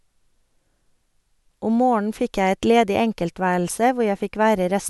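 No technical faults can be heard anywhere in the clip.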